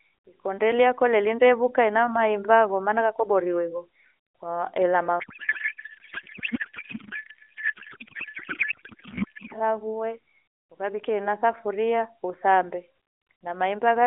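From 5.20 s to 9.54 s the speech gives way to garbled noise and warble that barely tracks it, a codec payload misread. The AMR decoder is receiving frames packed differently from how it parses them. The sound fits octet-aligned payloads being read as bandwidth-efficient, which shifts every field out of place. The decoder synthesises from wrong parameters until the packing matches again at 9.54 s, where the narrowband AMR-NB sound, with its light codec coloration, returns.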